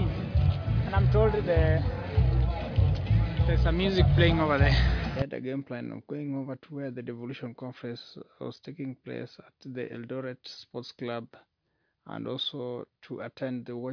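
Nothing stood out as a technical problem on listening to this audio.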